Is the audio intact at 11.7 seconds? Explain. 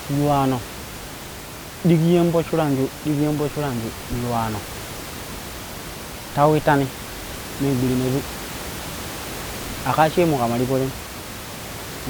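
Yes, the audio is intact at 11.7 seconds, with only the room's own background noise sitting about 13 dB below the speech.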